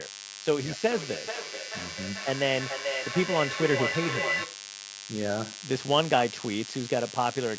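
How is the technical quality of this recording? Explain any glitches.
The recording has two clear faults: a constant buzz and a looping echo.

DECT cordless phone buzz, throughout: a nearby DECT handset or base station's radio bursts every 10 ms are rectified by the audio circuitry, giving a thin 100 Hz buzz, rich in harmonics, sitting not far below the speech.

Feedback echo between two devices, 0.6 to 4.74 s: another device in the room replays this microphone's audio and it gets picked up again, so speech returns roughly every 0.4 s, thinner and ringing, peaking about 3 dB below the speech.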